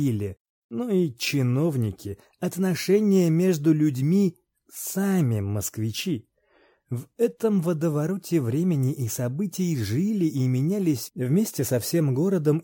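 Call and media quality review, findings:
No audible faults found; nothing to flag.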